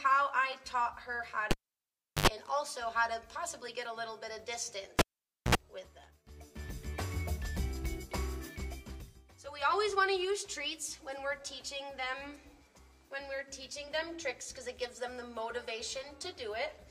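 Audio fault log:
1.51–2.28 s and 4.99–5.55 s, cable pulled and plugged in: each event opens with a pop as the live connector breaks contact, then drops to near silence while the cable hangs loose, about 0.72 s the first time and 0.51 s the second. On reinsertion the tip touches before the sleeve grounds, so unshielded mains hum leaks in, 84 ms of 50 Hz buzz and then 65 ms of 60 Hz buzz. A second pop follows as the sound returns.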